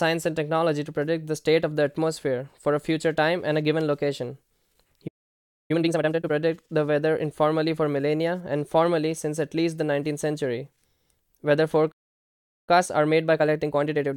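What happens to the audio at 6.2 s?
At 6.2 s the speech is inside a time-compressed catch-up running from 5.71 to 6.31 s: the player drains its backlog by cutting and cross-fading small slices, playing at 2.0x. It sounds rushed, but the pitch stays normal, unlike a simple speed-up.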